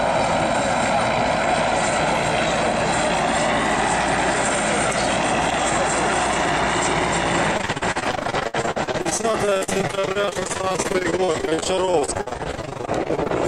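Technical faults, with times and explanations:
7.57–13.31 s, repeated packet loss (robotic sound): the audio turns choppy, with holes of up to 63 ms recurring every few tens of milliseconds. Each hole is bridged by stretching the preceding sound, so about 39% of this stretch is synthetic fill.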